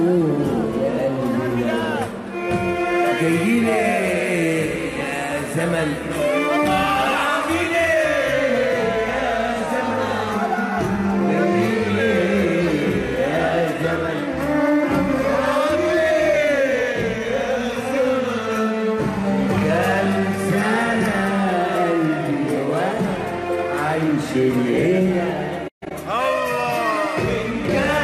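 No technical faults are audible.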